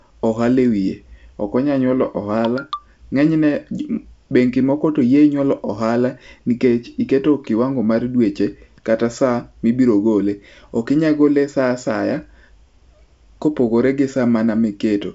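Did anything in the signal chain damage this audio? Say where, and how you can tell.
No, nothing in this speech clip stood out as damage from any stage of the chain on listening.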